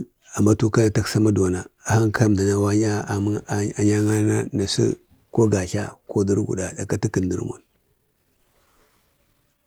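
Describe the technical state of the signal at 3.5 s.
At 3.5 s the speech signal is intact, with no audible fault at that moment.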